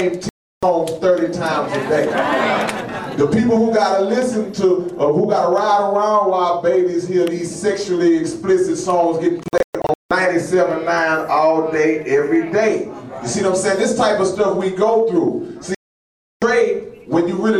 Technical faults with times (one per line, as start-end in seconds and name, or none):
0.29-0.63 digital broadcast dropout
9.43-10.11 digital broadcast dropout
15.75-16.42 digital broadcast dropout